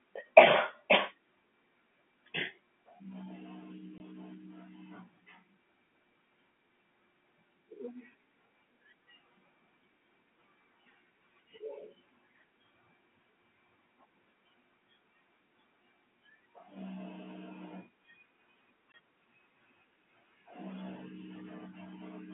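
Packet loss filled with silence hits at 3.98 to 4.00 s and 18.92 to 18.94 s. The receiver inserts a 20 ms hole, which fits one lost packet, and the hole has hard edges.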